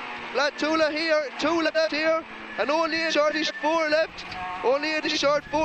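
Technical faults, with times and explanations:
1.65–1.88 s, 3.10–3.51 s and 5.04–5.18 s: frames out of order. In each span, two adjacent blocks of about 93 ms, 186 ms and 46 ms play in swapped order, consistent with runs of two, four and one coded frames. The sound becomes a brief garbled flutter. Unlike a dropout or repeat, nothing is missing or played twice, and the timing afterward stays intact.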